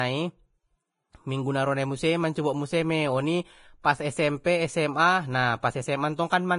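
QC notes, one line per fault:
Throughout: Vorbis compression, heavy. Nothing reaches above 10.6 kHz, and the treble of the speech below that line turns hissy and grainy, with fizzing sibilants and smeared consonant attacks. This is likely a low-quality Vorbis encode, consistent with a bitrate near 29 kbps, where coarse quantisation turns fine detail into noise of similar energy. A plain low-pass filter would dull the top cleanly, while this leaves rough, noisy grain under the cut-off.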